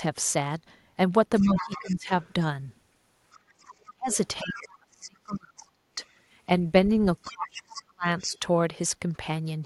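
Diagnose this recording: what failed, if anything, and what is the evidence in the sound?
Other side's voice leaking through at 1.38–2.33 s, 3.31–4.68 s and 8.19–8.39 s, about 15, 25 and 35 dB below the talker. This is likely residual echo in call processing. A spectrogram would show faint, separate harmonic traces.

Speech suppressed in double talk at 1.4–2.11 s, 3.86–6.01 s and 7.23–8.43 s, dipping about 15, 40 and 35 dB. The likely cause is the echo canceller ducking both talkers. The waveform would show the talker's envelope dipping.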